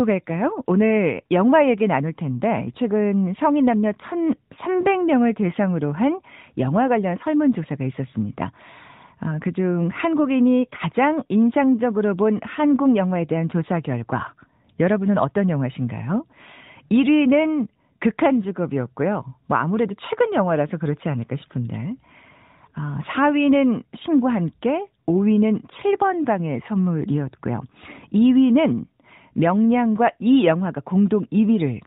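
No technical faults are audible.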